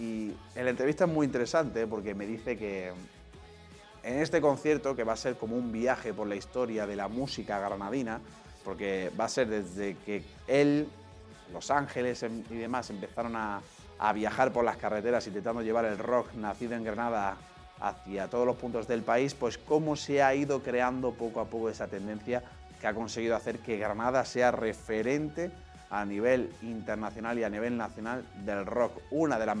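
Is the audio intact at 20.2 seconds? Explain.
Yes, at 20.2 seconds the audio plays through cleanly, with no dropout, click, distortion or other fault.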